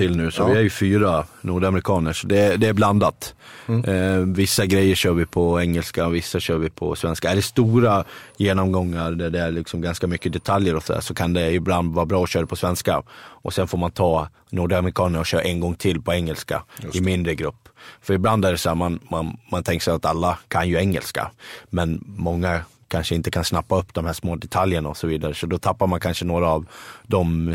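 Nothing in the recording stood out as a technical fault on listening.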